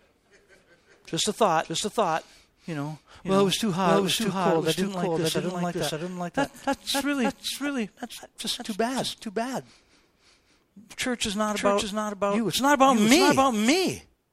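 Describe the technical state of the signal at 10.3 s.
At 10.3 s, as throughout the clip, a doubled audio track is present: a full-band copy of the speech trails about half a second behind, roughly 5 dB quieter, likely from a second capture path. It sounds like a dry, echo-free repeat, and the spectrogram shows every syllable duplicated at a fixed offset.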